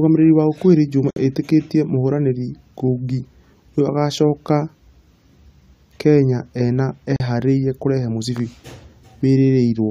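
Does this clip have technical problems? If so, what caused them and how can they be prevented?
Yes. Gaps at a join of encoded pieces cut the speech at 1.11–1.16 s (58 ms) and 7.16–7.20 s (37 ms), six seconds apart. Separately encoded pieces kept their encoder delay and padding. Trim both before joining, or encode the speech in one pass.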